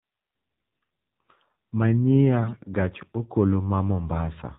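AMR narrowband mobile codec runs throughout: the speech is squeezed into a 4 kHz band by a vocal-tract model, sounding buzzy and synthetic, which fits a 7.4 kbps mode. AMR bit errors strike at 0.83 s and again from 2.44 to 2.75 s, where flipped low-priority bits misplace excitation pulses and skew the finer parameters. Pitch and level hold, but the voice turns hoarse, scratchy and gargly.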